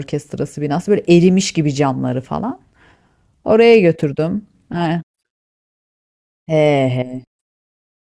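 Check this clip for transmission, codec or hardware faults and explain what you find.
Nothing stood out on listening to the speech that would point to a transmission, codec or hardware problem.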